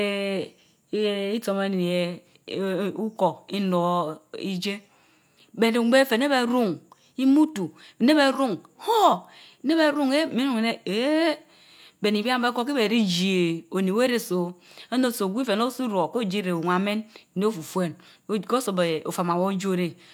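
No technical faults can be heard anywhere in the recording.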